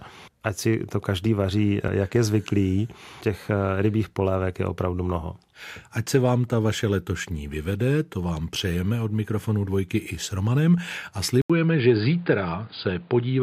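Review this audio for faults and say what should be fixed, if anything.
After an 80 ms gap at 11.42 s, speech loses everything above 4.9 kHz and gains noise about 30 dB down, likely an input switched to a poorer device. Lock the recording input to one device and disable automatic switching to headset call profiles during capture.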